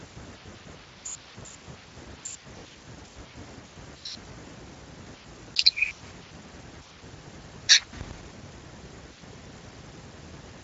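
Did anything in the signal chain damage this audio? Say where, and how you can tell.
No, nothing in the chain did.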